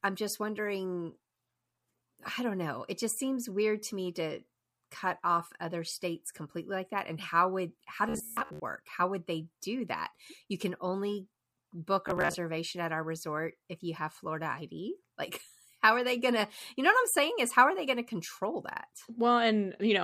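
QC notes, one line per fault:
8.09–8.60 s and 12.08–12.35 s, Bluetooth stutter: after "and how would how" and "you can only book", lost packets make the receiver replay its last tiny slice, a machine-gun buzz (runs up to about 150 ms), then resuming ahead. Spectrogram shows repeated identical vertical stripes; waveform shows tiled copies.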